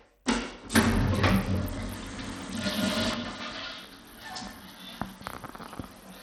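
From the start, the treble is dull and flickers, and a gritty, grainy noise clings to the sound. This is likely Bluetooth SBC compression. Its coarse sub-band quantising starves the upper bands, and the damage is plainly audible, which fits a low bitrate around 80 kbps.

At 3.14 s the level suddenly falls by about 6 dB and stays down to the end. The cause is likely one channel dropping out. With one stereo side gone, the mono sum loses half its shared content.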